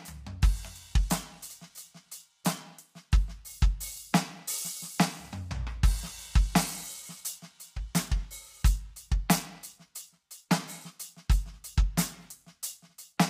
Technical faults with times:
0.00-13.29 low-delay AAC compression

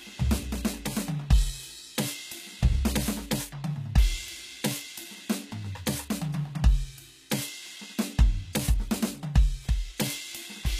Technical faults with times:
0.00-10.79 HE-AAC compression

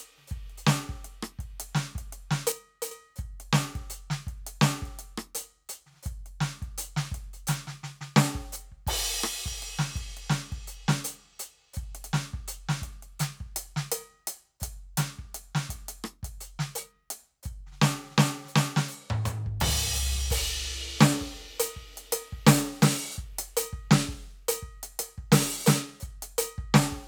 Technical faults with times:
2.52-2.91 one channel drops out

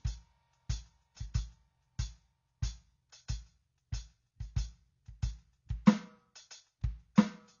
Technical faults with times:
0.00-7.60 AAC compression

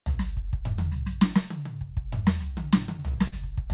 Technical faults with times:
2.54-3.34 repeated stalls (stutter)

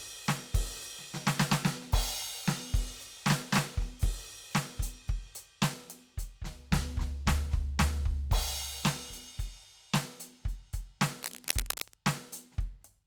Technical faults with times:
11.19-11.95 cable scratch noise

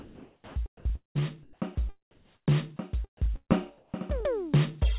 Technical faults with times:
0.00-1.77 sound chopped by the voice detector
2.11-2.47 comfort noise in place of the background
3.26-3.94 comfort noise in place of the background
3.36-3.51 burst of packet loss

